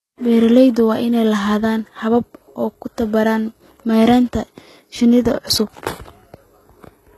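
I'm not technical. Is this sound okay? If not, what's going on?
No. Likely HE-AAC compression throughout the clip: the high end is rebuilt by copying lower sounds upward, so s sounds come out gritty and metallic, with nothing above 12.4 kHz.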